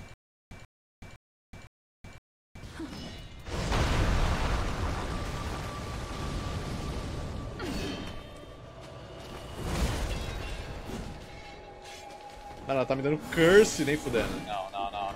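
From the very start to about 2.63 s, the clip is caught in a stutter with silent gaps that is already under way as it opens. A burst of about 0.14 s of sound repeats five times, each followed by about 0.37 s of digital silence, giving an even cycle of about 0.51 s. This likely comes from a stalled player or stream replaying its last buffered fragment at each retry and then running dry. Whatever sound belonged in those gaps is missing.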